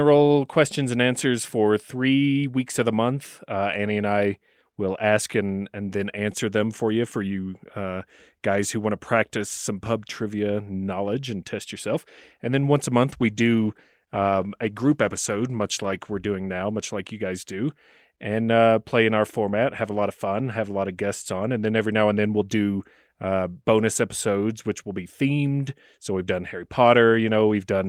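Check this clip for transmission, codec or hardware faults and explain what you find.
One fault is present: a call bitrate drop from 13.1 to 16.17 s, beginning after "then once a" and recovering by "doing now much like". The call's bandwidth estimate fell and the encoder coded the speech more coarsely for about 3 s, which fits a cut from 32 to 16 kbps. The speech turns rough and muffled. On a spectrogram the upper frequencies thin out and look blotchy across that stretch, while the waveform changes little.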